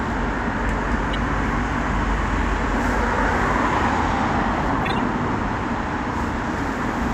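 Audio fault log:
1.13–1.15 s: corrupt frame decoded. Flipped bits in a compressed frame of this everyday sound were decoded as if valid, so misread codes and gains put energy at the wrong frequencies. The result is a short, fairly loud blip of about 30 ms, a few frames long.
4.83–4.98 s: corrupt frame decoded. The same damage runs across several consecutive frames here, giving a longer burst of misplaced, noisy energy of about 150 ms.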